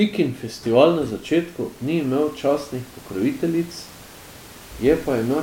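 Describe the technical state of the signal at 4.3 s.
At 4.3 s the signal is intact, with only the room's own background noise sitting about 23 dB below the speech.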